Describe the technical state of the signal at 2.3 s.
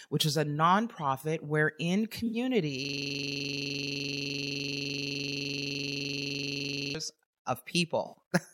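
Right at 2.3 s, just after "is a nonprofit wherein", you get an AAC frame loss with concealment, running from about 2.26 to 2.36 s. Roughly 64 ms of audio went missing, which fits about three dropped frames, and the decoder papered over the gap by reusing the last good spectrum with scrambled phase. It's too short to fade to silence, so what you hear is a brief smeared, noisy, phasey blur in the speech.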